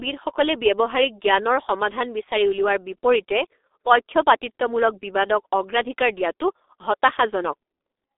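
The speech passed through a G.723.1 codec from start to finish, squeezed into a telephone band of roughly 300 Hz to 3.7 kHz with nothing above 3.8 kHz, and heavily coded at a rate that fits 6.3 kbit/s, leaving it dull, muffled and rough, with smeared consonants.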